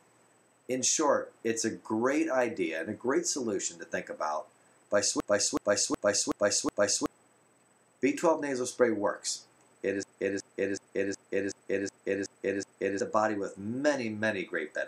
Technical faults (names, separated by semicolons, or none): system hang loop